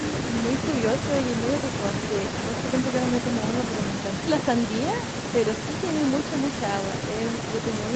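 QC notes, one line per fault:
No faults: the speech has the normal character of a wideband call, with nothing above 8 kHz and the coding texture expected of a call codec.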